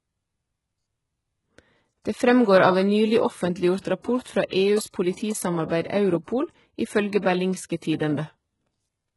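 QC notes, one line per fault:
throughout, HE-AAC compression: the treble sounds gritty and lispy, with heavy damage and nothing above 11.5 kHz. The likely cause is HE-AAC at a very low bitrate, around 12 kbps, rebuilding the top band from copied lower bands, so harmonics misalign.
4.22–4.26 s, pre-echo: a sharp attack arrives softened and smeared, with a short hiss spreading about 35 ms ahead of it. The codec spread quantisation noise across the whole block, so noise sized for the loud onset leaked into the quiet moment before it.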